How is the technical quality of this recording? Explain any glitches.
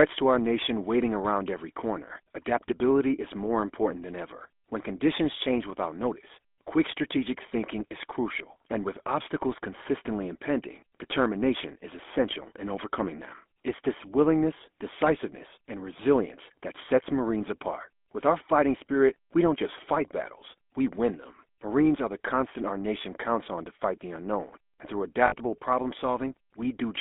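The recording carries plainly audible GSM full-rate codec damage throughout, plus one short dropout near the end.

Across the whole clip the speech passes through the GSM full-rate codec, consistent with 13 kbps GSM full rate. The codec keeps a rough model of the vocal tract and drives it with a thinned, regularly spaced pulse train instead of the real excitation, so voicing comes out buzzy and gravelly. The band runs only from about 250 Hz to 3.5 kHz, which makes it boxy and thin. What distinguishes this from plain band-limiting or a noisy line is that the roughness is inside the voice itself and follows its pitch, not steady hiss.

From 25.26 to 25.56 s, just after "the unknown and through", lost GSM frames break the speech. About 60 ms of data went missing, which fits three lost 20 ms frames. The decoder filled the gap by repeating the last good frame's parameters, so the sound is smeared into a brief metallic, ringing hold. 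Unlike a clean dropout or a click, it neither goes silent abruptly nor snaps. It rings.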